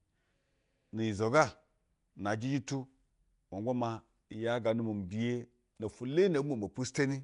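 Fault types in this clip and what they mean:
Nellymoser compression: the speech has a rough, hissy halo and a smeared, underwater blur throughout, with nothing above 10.6 kHz, likely from Flash's Nellymoser Asao codec at a rate that fits about 44 kbps. Unlike MP3's warbling swirl, its starved bands are filled with noise.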